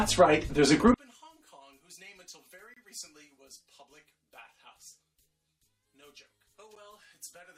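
At 0.94 s the level falls by about 30 dB and stays down to the end. What remains is only a low residue of the original sound, with the background dropping along with everything else. The likely cause is one channel inverted: with one side's polarity reversed, whatever the two channels share cancels when they are folded to mono, leaving only the small difference between them.

At 2.74 s to 2.77 s a hole of about 26 ms cuts into the sound with abrupt edges, and a second, shorter one of about 9 ms follows at 6.75 s. These are gaps between stream segments. The time stamps of adjacent segments, which fall every 4 s here, leave a small interval uncovered, and the player fills it with silence. Nothing is lost from the signal itself. The sound simply pauses and resumes.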